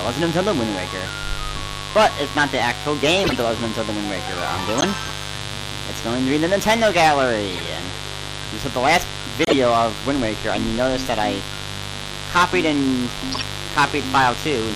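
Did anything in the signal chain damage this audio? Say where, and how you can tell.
Yes. Analogue wiring let in a 50 Hz mains buzz, about 10 dB below the signal, throughout. Its raspy, harmonic-rich edge, rather than a smooth tone, points to switching spikes, not plain hum.

At the codec stage, a watery, swirling texture persists throughout. This is likely low-bitrate MP3 compression, around 64 kbps, shown by flickering weak components.

Five short chirp-like bursts of misplaced energy at 3.24–3.34, 4.78–4.84, 7.52–7.60, 9.43–9.53 and 13.32–13.43 s show a corrupt frame decoded, each spanning a few frames. The loudest is at 4.78 s. The frames were played damaged, not dropped.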